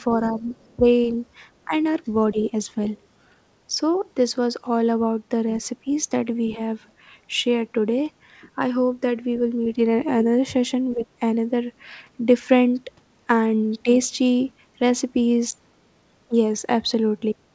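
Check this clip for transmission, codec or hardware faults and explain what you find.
Two echo-cancellation faults are audible. They sit on a call path whose band stops at 8 kHz, which fits a wideband codec such as G.722.

Speech suppressed in double talk: the speech briefly ducks at 0.16–0.84 s, 1.65–1.74 s, 2.32–2.53 s, 3.74–3.78 s, 10.95–11.04 s and 13.83–13.89 s. The deepest dips are about 15 dB. The likely cause is an echo canceller that heard both sides at once and turned everything down.

Other side's voice leaking through: a faint second voice sits under the talker at 0.49–0.75 s, roughly 30 dB below the speech, and returns even fainter at 6.86–6.92 s. It is far-end sound from the loudspeaker that the echo canceller likely failed to remove completely.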